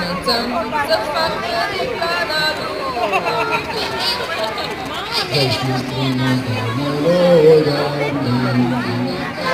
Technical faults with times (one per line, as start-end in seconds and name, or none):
3.77-6.28 GSM signalling bursts
6.28-7.17 GSM phone buzz